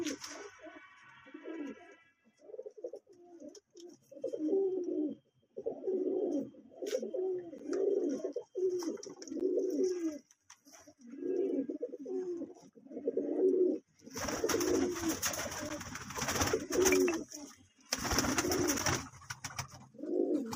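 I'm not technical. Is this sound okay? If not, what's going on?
No. At 7.58, 9.40, 15.69 and 18.78 seconds you'll hear a small tick or dip, like a tiny skip. Each one is a block of digital silence: for about 11 milliseconds the sound drops to complete nothing and then snaps back, with no fade. The playback or recording program most likely didn't hand over the next chunk of audio in time. The matching lengths fit a 512-sample buffer.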